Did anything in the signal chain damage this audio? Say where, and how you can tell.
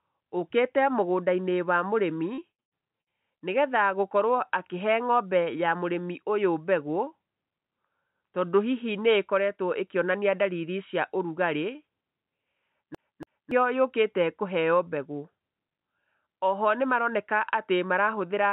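Yes. The network stage damaged it from 2.34 to 3.42 s. This is repeated packet loss, heard as robotic sound. Five gaps occur, the longest 111 ms. Each is filled by stretching the last sound, so about a quarter of that span is patched.

Playback from storage shows a CD stuck on one turn from 12.95 to 13.51 s. The same 0.28 s piece repeats twice, with a short mute at each jump. A scratch throws the laser back one track every rotation.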